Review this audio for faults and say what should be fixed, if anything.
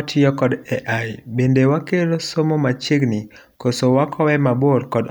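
Nothing here needs fixing; no faults can be heard.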